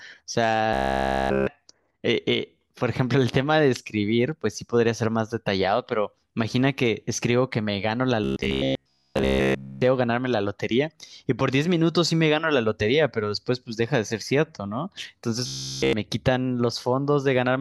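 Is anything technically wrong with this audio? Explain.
Yes. Robotic sound from repeated short buffers at 0.73 to 1.47 s, 8.24 to 9.82 s and 15.47 to 15.93 s: the speech becomes a rigid 66.8 Hz metallic buzz, likely from a 15 ms chunk looped in place of all real audio.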